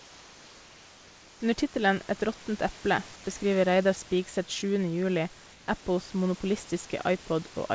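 From 0.00 to 1.40 s, at 3.16 to 3.24 s just after "råttent eple", and at 5.52 to 5.68 s, the room background becomes a steady, featureless hiss about 2 dB quieter: comfort noise in place of the background, likely from discontinuous transmission during pauses.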